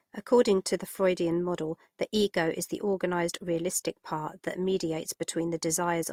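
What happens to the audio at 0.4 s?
At 0.4 s the speech carries the layered artefacts of transcoding between lossy codecs, present throughout the clip. The sound fits a likely chain of Vorbis at roughly 67 kbit/s followed by Opus at 32 kbit/s, where Opus re-encodes Vorbis's artefacts and adds its own.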